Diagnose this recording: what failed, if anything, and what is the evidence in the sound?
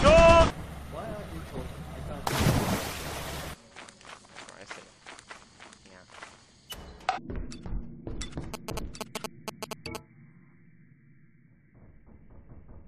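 At 7.16 s the sound jumps abruptly ahead with a small blip, as if a stretch of the programme had vanished. This is most likely a stream segment skipped at the network or playback stage: one segment failed to load, and the player went straight on to the next.

From 8.54 to 9.97 s there is a galloping dit-dit-dit of short buzzes at a 217 Hz rate, nearly as loud as the programme itself. These are GSM signalling bursts from a nearby 2G phone. The analogue wiring or input stage rectifies its intermittent radio bursts into audible pulses.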